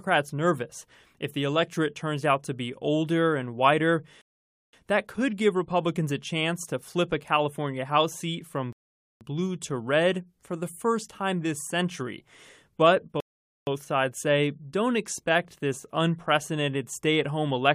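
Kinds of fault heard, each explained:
Rebuffering stall: playback ran out of data, so the speech cuts to silence and resumes exactly where it stopped, nothing lost. There are three pauses of about half a second: after "be older and whiter", after "seat from", and before "sides say don't expect".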